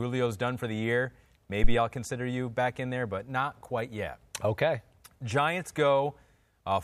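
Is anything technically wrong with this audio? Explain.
Yes. There is a phantom power thump in this speech, from 1.64 to 1.75 s, right after "done for the year" and before "I'll consider you back". A supply was switched on or off on a live input. The sudden voltage step passed through the coupling capacitors as one low-frequency pulse. It is heard as a deep thump peaking at about -8 dBFS. It dies away quickly, with a decay of about 24 ms.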